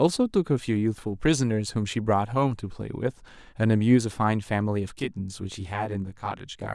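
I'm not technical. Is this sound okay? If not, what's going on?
No. From about 5.00 seconds to the end, the speech has channel delay (comb filtering). One of the two stereo channels runs roughly 20 milliseconds behind the other, and when they are mixed into a single channel, parts of the sound cancel at many evenly spaced pitches, starting very low, around 20 Hz. That cancellation is why the voice suddenly sounds rough or slightly doubled.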